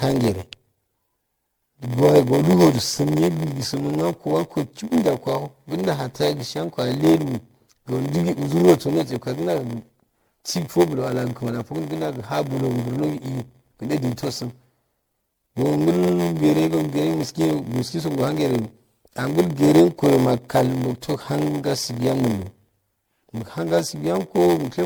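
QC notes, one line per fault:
throughout: block size mismatch (padded). A buzz at 86.1 Hz runs under the speech, which also plays about 6% slow (0.938x) at normal pitch. This fits shorter blocks padded out to a 512-sample read. The spectrogram shows vertical stripes at 86.1 Hz, and the waveform shows regular short gaps.
throughout: generation loss. The speech sounds swirly, hollow and smeared, with blurred consonant onsets, and nothing sits above 20.1 kHz. This likely comes from about seven rounds of MP3 re-encoding near 96 kbit/s. The spectrogram shows patchy holes and flickering high bands, with transients smeared in time.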